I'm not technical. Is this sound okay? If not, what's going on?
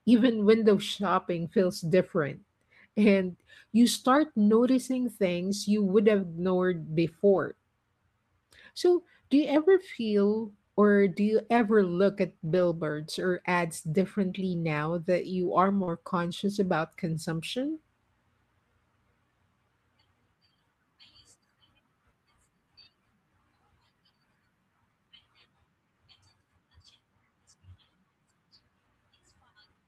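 No. This speech has two kinds of small network glitch.

Lost packet rebuilt from error correction: tiny pieces of the call went missing, and a rough backup copy was played in their place. There is no gap. You hear a brief grainy moment at 1.07, 4.15, 7.35, 11.57, 13.25 and 15.87 seconds. A longer one runs from 12.45 to 12.59 seconds.

Short concealed packet loss: from 15.83 to 15.89 seconds, about 40 milliseconds of sound never arrived. The player covered the hole by stretching the last sound forward. It comes across as a quick smear or wobble. It leads straight into the rebuilt piece at 15.87 seconds.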